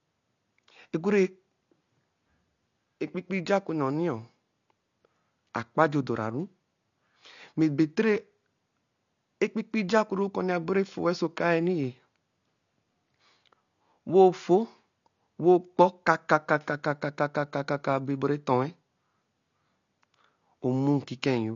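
From start to finish the speech is dull and smeared, with a warbling, fizzy texture on sibilants and held sounds, most likely AAC compression at a low bitrate around 32 kbps. A spectrogram shows a hard ceiling near 7.1 kHz.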